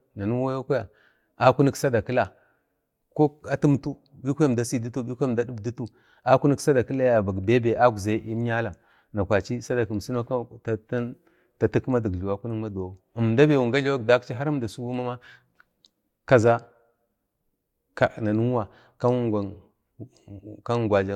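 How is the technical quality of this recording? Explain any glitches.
Nothing in this recording stood out as a technical problem on listening.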